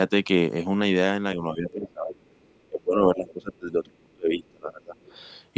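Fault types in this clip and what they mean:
Speech suppressed in double talk: From about 1.52 s to 4.95 s the talker's speech keeps sinking and breaking up, for roughly three seconds in total, at worst falling by something like 25 dB, so stretches lose their brightness or drop out in fragments. This is likely an echo canceller that heard both ends talking at once, could not tell the talker apart from loudspeaker echo, and pulled the whole microphone signal down.
Other side's voice leaking through: Faint scraps of a second voice surface at 1.71 to 1.93 s, 3.27 to 3.33 s and 4.99 to 5.12 s, sitting well under the talker, roughly 20 to 30 dB down and fading with each appearance. They are short. The likely cause is the far end playing from the talker's loudspeaker back into the microphone, with the echo canceller leaving small residues of it uncancelled.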